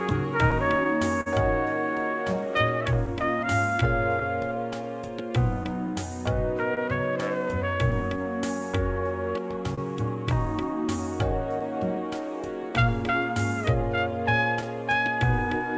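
The sender's audio clock runs about 3 percent slower than the receiver's for the whole clip, a case of clock drift between sender and receiver. The receiver's jitter buffer keeps draining as a result, so it cannot hold a steady pace. Across the recording this shows up as small, unevenly spaced timing hiccups rather than one clear event. The audio never quite settles into an even tempo, and the timing corrections below are its local symptoms.

Packets arrived late or went missing here and there, giving two stretches of scattered short gaps. Between 0.10 and 1.28 s there are about four holes, together roughly 70 ms of patched sound, the longest around 50 ms. Between 3.06 and 7.94 s about seven more add up to roughly 70 ms, none longer than about 30 ms. Each hole was filled by carrying the previous sound forward, so nothing drops out. What remains are brief ticks and smears.

Because the sender runs slow, the receiver makes repeated timing corrections from 3.21 s to 15.66 s. 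It stretches the audio in small steps, playing it at about 98 percent speed and adding roughly 200 ms overall. The edits all lengthen the sound but are not evenly spaced. Each one is tiny, so they come across as a faintly dragging, slightly uneven pace rather than distinct glitches.

At 9.75 to 9.79 s there is a short stall from a late packet. The jitter buffer ran empty, and the receiver held the last sound for 29 ms until the data arrived, adding 29 ms of delay. It then resumed from the same point, so nothing is lost. The held sound is heard as a brief stretched moment with a slight buzz or dip.

All of this travels over a WebRTC call path with G.722 coding, which fits a 64 kbps link. That path leaves no content above 8 kHz.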